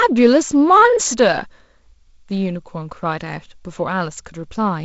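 Listening through this speech clip, nothing technically wrong stood out.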